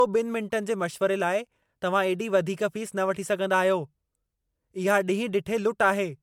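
Generation loss runs through the whole speech clip, from start to end. The sound is swirly and hollow, with a smeared, watery texture and blurred consonant attacks, more degraded than a single MP3 encode at this quality would leave it. The likely cause is repeated lossy coding: the character fits an MP3 chain around 128 kbit/s applied about four times over. Each pass re-quantised the signal on a shifted frame grid, so noise and spectral gaps accumulated, while content still reaches up to 20 kHz.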